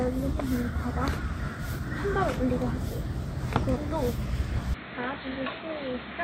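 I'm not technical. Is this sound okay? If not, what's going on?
No. At 4.74 s the sound suddenly turns dull and boxy, drops noticeably in loudness, and a faint new hiss appears, with no gap. The likely cause is an input switched to a poorer device, one that carries nothing above 4.2 kHz.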